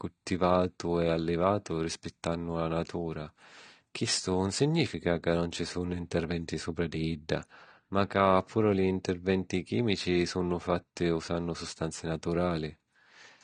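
All the way through, the speech is dull above 9.7 kHz with a smeared, warbly texture, likely AAC compression at a low bitrate, somewhere around 32 kbps.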